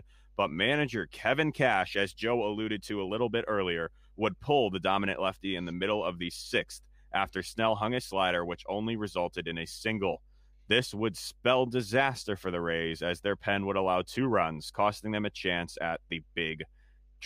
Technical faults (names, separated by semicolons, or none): mains hum